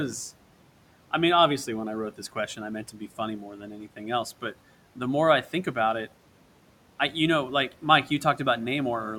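A speech recording in which the noise suppressor cuts into the speech between 3.57 and 4.0 s, pulling parts down by up to about 7 dB, roughly 150 ms in total, so the affected sounds come out swallowed and faint. The suppressor treated them as noise alongside the room noise, which sits about 22 dB below the speech.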